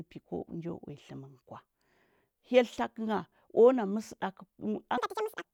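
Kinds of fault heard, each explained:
Audio read two samples at a time (double speed), 4.98 to 5.44 s: sample pairs are taken as single frames, so the speech jumps to twice speed, an octave up.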